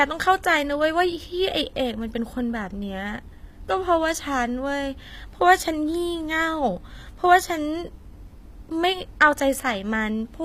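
Throughout, the treble sounds synthetic, with gritty, lispy sibilants and nothing above 15.5 kHz, likely HE-AAC compression at a low bitrate near 24 kbps rebuilding the highs by band replication.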